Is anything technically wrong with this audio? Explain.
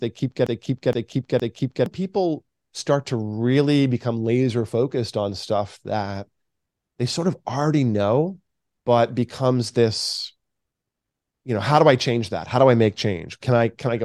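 Yes, there are two faults.

From 0 to 1.86 s there is a broken-record loop that is already running when the clip begins. The player or stream likely stalled and kept re-sending the last fragment in its buffer. A 465 ms slice of the speech plays three times back to back, identical each time. The speech that belonged in those seconds is gone, replaced by this stuttering repetition.

At 5.86 s there are dropped samples. Roughly a single sample is likely missing from the stream. The waveform jumps abruptly from one value to a later one, a gap far too brief to remove any audible speech. It is heard as one sharp, isolated click and shows as a thin vertical line across the spectrum.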